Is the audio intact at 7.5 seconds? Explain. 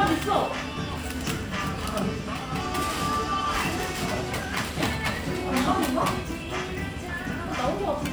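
Yes, the audio at 7.5 seconds is intact, with no dropout, click, distortion or other fault at that moment.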